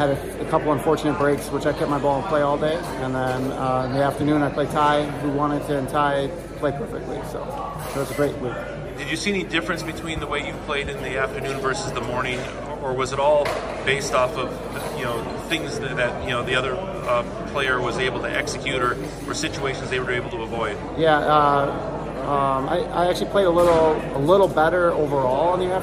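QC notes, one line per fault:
Throughout: mains hum. There's a steady low drone at 50 Hz running under the whole clip, sitting somewhere around 20 dB below the main signal. That's power-line frequency getting into the audio path, most commonly from a ground loop between connected gear or a transformer close to a cable or input. It never changes pitch or level because the power supply driving it doesn't.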